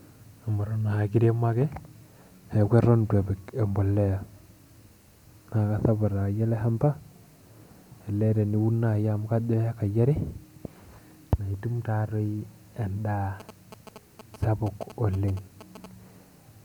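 A nearby 2G phone exchanging signalling bursts with its network was picked up and rectified by the audio circuitry from 13.4 to 15.86 s, producing GSM signalling bursts over the speech. The phone transmits only brief clusters of radio pulses at a rate of about 217 Hz, so the interference arrives as a galloping dit-dit-dit of short 217 Hz buzzes. It sits roughly 15 dB below the speech, and the clusters stop and start rather than holding steady.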